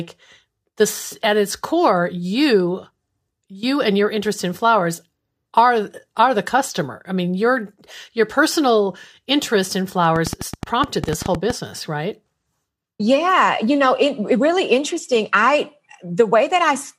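After "your personal interest in", 10.16 to 11.51 s, uneven popping ticks over the speech: a train of clicks, about fifteen at 9.7 per second, likely equipment interference.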